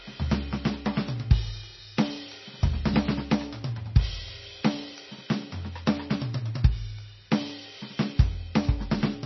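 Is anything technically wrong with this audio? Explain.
Yes. Throughout the music there is heavy damage, likely from MP3 compression at a very low bitrate. The treble stops dead at 5.9 kHz, which on a spectrogram is a flat ceiling. Weak frequency lines flicker on and off between frames, appearing as speckled holes, so the sound turns watery and swirly and its attacks smear.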